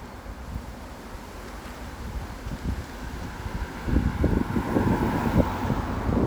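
No technical faults can be heard anywhere in the recording, and the signal stays intact and continuous throughout.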